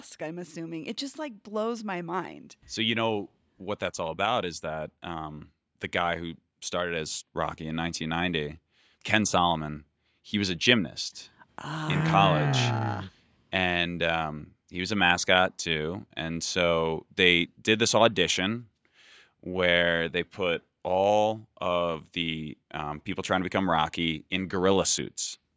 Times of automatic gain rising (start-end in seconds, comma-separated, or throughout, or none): 0.19-10.32